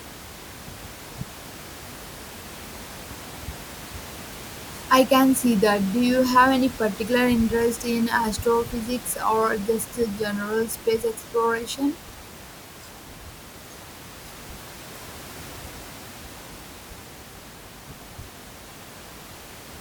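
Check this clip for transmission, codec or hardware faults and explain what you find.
Nothing stood out on listening to the speech, with only the room's own background noise audible at about 18 dB below it.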